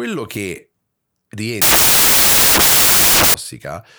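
From 1.62 s to 3.34 s the speech gives way to loud, broadband hiss, the signature of samples built from the wrong bytes. In this stretch the reader pairs the bytes of each sample incorrectly, so the rapidly fluctuating low-order bits land in the high-order position and dominate every value. The result is noise close to white at high level on the louder speech.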